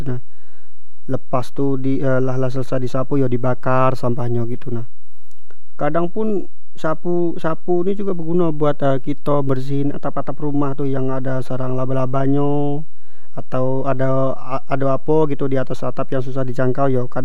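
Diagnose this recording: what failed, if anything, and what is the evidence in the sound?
The failure is a DC offset, present for the whole speech clip and most likely introduced at the analogue front end or the converter input. The waveform sits on a constant shift of about -13 dBFS, so nothing is heard directly, but that shift eats headroom and puts steady energy at 0 Hz. Mains hum would show a 50 or 60 Hz tone with harmonics. Here there is no tone, only a fixed displacement from zero.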